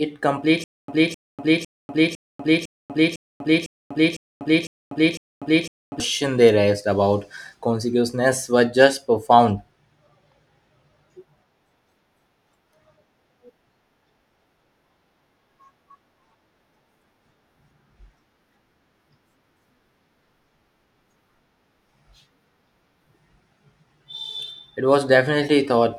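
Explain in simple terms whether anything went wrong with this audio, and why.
From 0.64 to 6.0 s, a quarter-second speech snippet repeats ten times with silence between: stutter with silent gaps, likely from playback stalling.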